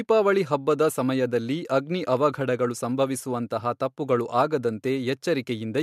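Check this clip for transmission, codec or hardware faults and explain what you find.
Nothing faulty can be heard anywhere in the speech.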